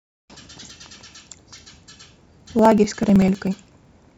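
A short speech recording carries a steady, fine ticking from 0.07 s to 4.10 s, a regular click roughly every 0.063 s, about sixteen a second, that rides on the voice and vanishes when the signal drops away. These are periodic USB or driver dropouts: something stalls the USB link or audio driver on a fixed cycle, and each time around a millisecond of audio is skipped outright, the splice producing a tiny discontinuity heard as a tick, around seventy across the clip.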